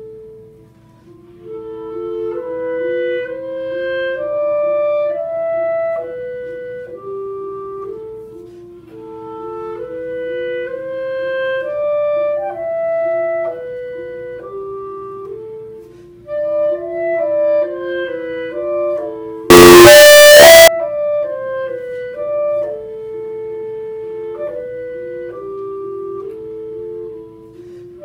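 From 19.50 to 20.68 s the audio turns into harsh, very loud distortion, with quiet moments as loud as peaks. The likely cause is signed and unsigned mixed up, fitting 16-bit samples, so each zero crossing jumps across the whole range. Clipping, by contrast, spares quiet passages.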